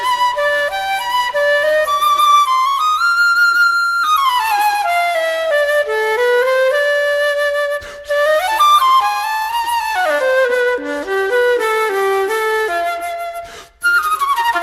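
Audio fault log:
No fault is heard anywhere in the clip. There is nothing to log.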